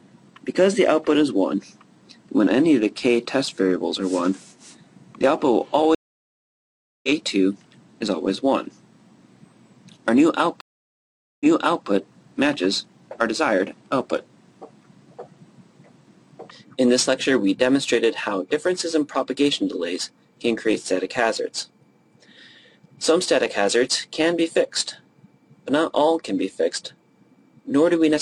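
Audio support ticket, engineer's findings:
Stream reconnects at 5.95–7.09 s (1.08 s dropout, resumes roughly a second ahead) and 10.61–11.87 s (0.8 s gap, replays 464 ms). Connection drop, fresh decoder joining mid-stream.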